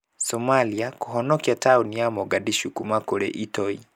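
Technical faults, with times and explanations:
No technical faults are audible anywhere in the recording.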